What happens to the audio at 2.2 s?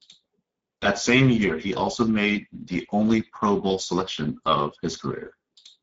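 At 2.2 s the speech is still going through the Speex codec, which spans the whole clip. A starved low-bitrate setting, near 10 kbps, leaves hoarse, noisy speech with nothing above 7.7 kHz.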